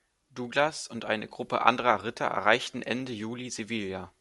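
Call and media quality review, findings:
No faults found in the speech recording. Nothing heard calls for a ticket against any component.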